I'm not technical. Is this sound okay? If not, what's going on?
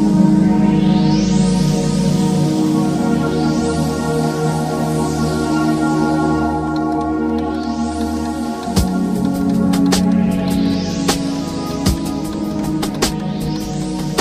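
Yes, nothing technically wrong can be heard in this recording. There is no moment anywhere in it that calls for concern.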